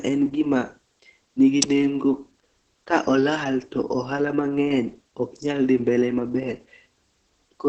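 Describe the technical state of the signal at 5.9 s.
At 5.9 s the speech carries Opus voice compression, present across the whole clip. The coder is working in its SILK linear-prediction mode, modelling the vocal tract and coding the excitation coarsely, as fits a bitrate around 10 kbps. Nothing above 9 kHz survives, so the speech sounds muffled and lacks air. The heavily quantised excitation makes it hoarse and slightly robotic, and any background sound comes out burbling.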